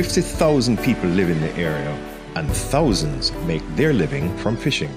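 Nothing stood out on listening; no fault could be heard at any point in the audio.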